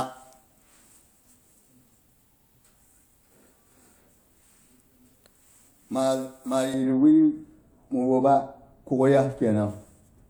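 From 6.74 s to the end, wrong de-emphasis appears. A treble cut meant for pre-emphasised audio rolls highs off smoothly, about 11 dB down at 10 kHz. Speech turns dull, muffled.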